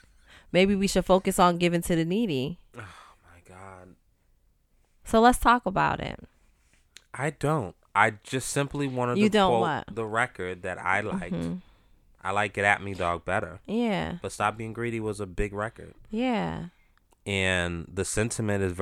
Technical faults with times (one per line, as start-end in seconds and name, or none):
none